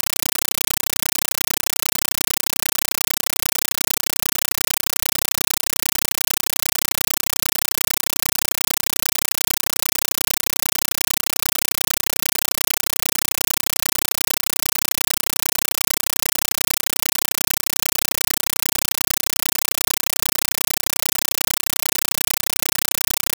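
From the first second to the end, the speech is replaced by a compressed stream played as audio: an AC-3 bitstream, apparently about 384 kbps, was passed through as plain samples rather than decoded. The result is very loud, harsh chattering static. Every 32 ms, 31.25 times a second, an 8 ms block of noise is followed by silent padding. The waveform shows evenly spaced solid slabs separated by flat gaps, and the spectrogram shows broadband vertical stripes.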